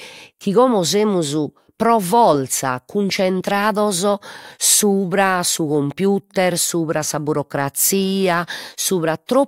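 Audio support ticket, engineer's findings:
Nothing stood out on listening to the speech in this clip.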